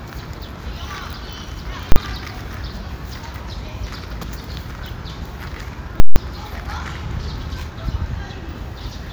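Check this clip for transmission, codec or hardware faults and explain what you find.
Two faults of invalid numbers at full scale occur, at 1.92–1.96 s and 6.0–6.16 s. Invalid calculations pinned the output at maximum. The 40 ms block is one bang. The 160 ms block pops loudly at both ends, silent between.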